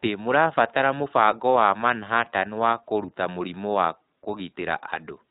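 From start to end, the speech carries iLBC codec damage, plainly audible. Nothing above 4 kHz survives, so it sounds narrowband and muffled. Each 20 ms frame is coded on its own. The result sounds rough and synthetic. The steady bitrate fits 15.2 kbps.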